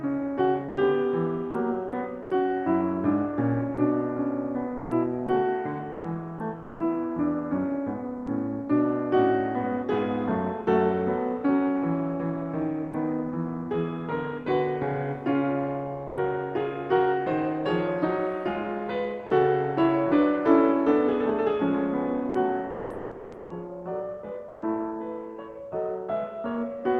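Sound chopped by the voice detector from 0.68 to 2.30 s: the music repeatedly breaks into comfort-noise fill, about 250 ms in total. The sender's voice detector, likely Opus DTX, kept switching transmission on and off.

Sound chopped by the voice detector again from 3.74 to 6.80 s, with about 500 ms replaced, as the detector likely gates the quieter passages.

Sound dropped by the voice detector at 8.26 s: a 10 ms sliver of music becomes steady noise. The detector likely misjudged it as background and briefly stopped sending.

Sound dropped by the voice detector from 12.91 to 12.93 s: 20 ms of music gives way to comfort noise, likely because the detector paused transmission.

Sound dropped by the voice detector from 16.07 to 16.17 s: a 100 ms gap filled with flat noise before the music returns, likely a detector misclassification.

Sound dropped by the voice detector from 19.26 to 19.30 s: about 30 ms of music is lost under 40 ms of fill, likely because the detector cut transmission momentarily.

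Sound chopped by the voice detector from 22.29 to 24.62 s, the heaviest stretch, with nearly 1 s replaced. The music stutters choppily as the detector likely toggles repeatedly. Throughout, the call codec's top end stops around 12 kHz.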